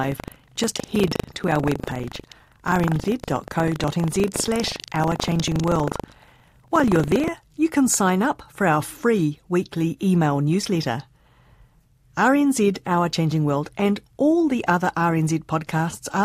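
From the start to 7.32 s, the writer and reader of the output ring buffer have slipped and cross inside every period, causing buffer tearing: roughly a tenth of each 40 ms block replays speech from about 150 ms earlier. The hard joins give a robotic 25 Hz rattle that ends before "you can sign up".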